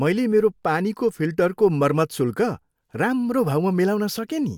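A speech recording with nothing technically wrong with it.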